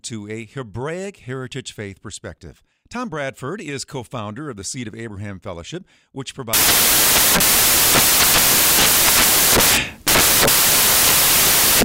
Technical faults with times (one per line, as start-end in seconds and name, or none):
6.53-11.84 samples built from the wrong bytes